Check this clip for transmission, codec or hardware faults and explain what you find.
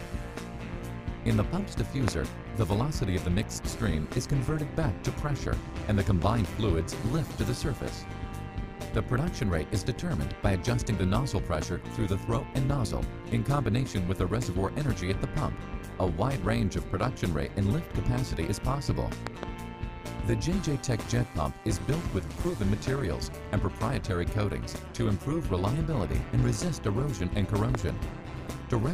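Two faults are present: a continuous overlap-add ripple and five loud pops.

The overlap-add ripple runs through the whole clip. The level swings by about 11 dB, around 150 times a second. The audio was split into windowed frames and rejoined with an overlap whose windows do not add up to a steady gain. Each frame therefore rises and falls in level. At this rate the result is a metallic buzz with extra tones around each note, over everything.

Loud pops occur at three points. There is a single pop from 2.08 to 2.10 s. There is a double pop from 19.27 to 19.45 s, and another double pop from 27.75 to 27.91 s. Each peaks at about 15 dB above the surrounding sound. The likely cause is a sudden voltage step or pulse, from a plug, a switch, static or a driver glitch, added to the signal. The pops are heard as sharp cracks on top of the sound, which carries on underneath.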